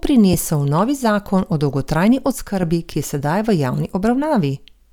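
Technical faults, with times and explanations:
0.33 s and 2.92 s: damaged data in a compressed stream. Brief blips, the second just before "ki je", where the decoder lost sync; on a spectrogram, thin broadband vertical streaks.
2.32–2.63 s: one channel drops out, between "o dolgotrajni" and "ki je". Level falls abruptly by about 6 dB, likely from losing one stereo channel before the mono sum; the waveform shows a clear step down.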